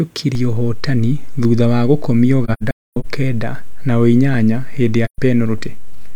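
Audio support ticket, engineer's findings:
DC step at 0.35 s: single low thump as the waveform's zero line jumps, then the offset holds right through to the end with no step back. Sound carries on unchanged over it. Probable component: converter or input stage, e.g. an offset-carrying input switched in or an ADC recalibrating. Worth checking coupling caps or input switching around that point.

AAC frame loss with muting, 2.44 to 3.06 s: patchy dropouts spread across about 0.6 s, the longest gap around a third of a second. Soft fades out and back in, so the decoder is zeroing missing frames and the window overlap is smoothing the edges. Total hole time points to roughly ten lost frames. Second hit at 5.05 to 5.19 s, about 0.13 s, same soft-edged hole, fits three frames. Suspect the transport feeding the decoder.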